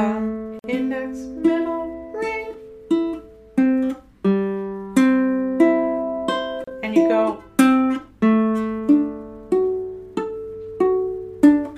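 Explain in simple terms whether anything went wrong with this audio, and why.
A gap at a join of encoded pieces appears twice: a 48-millisecond silence from 0.59 to 0.64 seconds and a 34-millisecond one from 6.64 to 6.68 seconds, six seconds apart. The audio was encoded in separate chunks and stitched together without trimming. Each encoder adds a little silence at its start and pads its final frame, so that dead air stays in at the join, breaking continuous sound before it resumes where it stopped.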